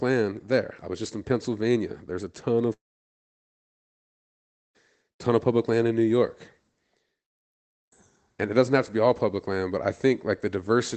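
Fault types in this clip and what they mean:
long network dropout: at 2.73 s the speech breaks off into a short fading buzz, then roughly two seconds of near-silence, and it picks up again at 4.76 s with that stretch simply gone, likely because packets stopped arriving and the receiver papered over the gap.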